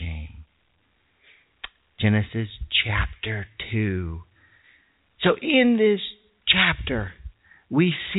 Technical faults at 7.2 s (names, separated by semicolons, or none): none